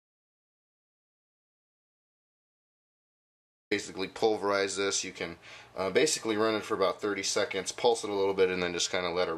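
From the very start of the clip until 3.71 s there is nothing at all: total silence, without even the faint room tone or hiss a live input would carry, and the sound then begins abruptly, mid-flow, as if joined already in progress. This is an audio dropout to silence, already under way when the clip opens. The likely cause is a lost input, such as a disconnected device, broken link or accidental mute, while recording continued writing silence, so whatever happened during that stretch is missing.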